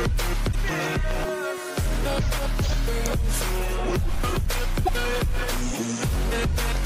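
Damaged data in a compressed stream shows up at 0.49 to 0.55 s and again at 4.82 to 4.89 s, each lasting about 70 ms. In both places the bytes feeding the decoder were corrupted, so it misread or rejected those frames, lost sync and had to hunt for the next valid frame header before playback could resume. Each event comes through as a brief disturbance such as a chirp, squawk, click or short hole.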